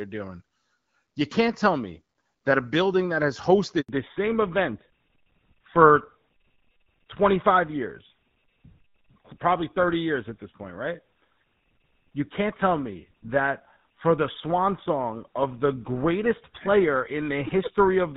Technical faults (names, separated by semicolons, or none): handover gap; fallback to narrowband